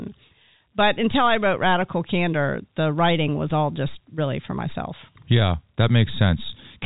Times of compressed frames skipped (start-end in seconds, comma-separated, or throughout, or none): none